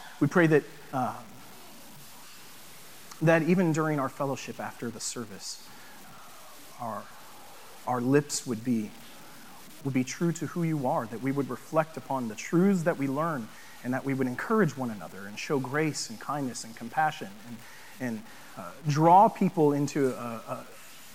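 From the first second to the end, the whole clip carries low bit depth without dither. There's a grainy, gritty distortion that rides along with the sound, roughest in the quiet passages, where the softest bits sputter or drop out to silence. The error sits only about 25 dB below the signal. That's likely a signal truncated to around 7 bits with no dither, so the rounding error tracks the audio instead of becoming a steady hiss.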